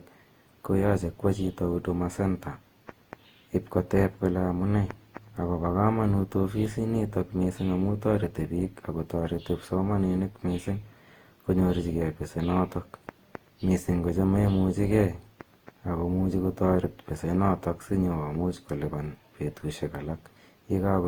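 From start to finish the speech has a swirly, hollow smear, with consonant attacks softened and a watery texture that is heavier than a single encode at this quality would produce, though the band still reaches to about 20.2 kHz. This is generation loss, the likely result of repeated lossy coding: the sound fits an Opus chain near 48 kbit/s run around seven times, each pass requantising on a shifted frame grid so noise piles up.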